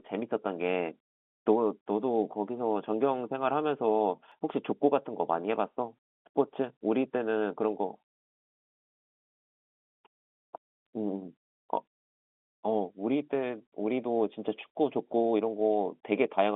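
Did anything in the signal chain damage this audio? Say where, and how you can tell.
Yes. At the buffer or recording stage, audio went missing between chunks at 4.32 s. A jump with no silence cuts the sound short there, losing roughly 40 ms. This is likely a handover gap between blocks, and fits chunks of about 6 s.

On the network side, bit errors on a digital phone line hit from 10.85 to 10.91 s. A short stretch of corrupted samples sits over the sound for about 60 ms. Flipped bits corrupted individual samples at a very low error rate, while the G.711 coding itself shows only its normal narrow telephone band.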